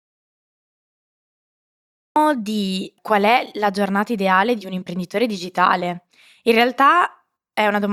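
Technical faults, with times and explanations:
0 to 2.16 s, audio dropout to silence: the clip opens already in a dead gap, dead digital silence with no room tone at all, and then the speech jumps straight in mid-flow at "di qual è la". Whatever was said before that point simply isn't there. The hard edge and the total absence of background noise point to the input likely dropping out, say a disconnected mic or a failed link, while the recorder carried on writing silence until the signal returned.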